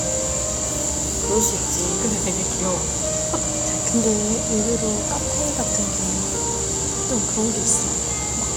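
No faults detected in these everyday sounds; nothing to flag.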